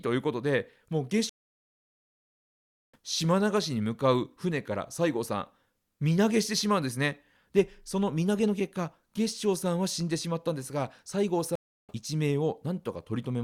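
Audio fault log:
1.29–2.97 s and 11.55–11.93 s, stream reconnect: the connection dropped, playback went silent for 1.64 s and then 0.33 s, and a fresh decoder picked up the live speech further along, skipping roughly 0.7 s and then about 0.3 s of material.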